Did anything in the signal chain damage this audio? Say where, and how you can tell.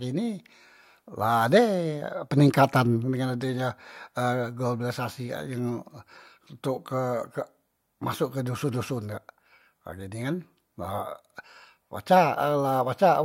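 No, I hear no damage from the signal chain.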